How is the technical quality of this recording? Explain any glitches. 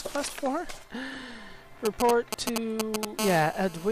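The recording is spoiled in its second half by interference from a nearby 2G mobile phone, first in short bursts and then as a continuous buzz.

From 1.85 to 3.05 s come GSM signalling bursts. The phone's radio pulses are rectified by the audio circuitry, producing a galloping dit-dit-dit of brief 217 Hz buzzes, roughly as loud as the sound itself. A waveform shows clustered spiky packets, and a spectrogram shows intermittent vertical combs of harmonics.

From 3.19 s to the end, the phone settles into call transmission and a steady GSM phone buzz appears. Its bursts repeat 217 times a second, giving a hard, raspy tone about 8 dB below the sound. On a spectrogram this is an unbroken ladder of harmonic lines spaced 217 Hz apart, and the waveform carries a regular pulse train.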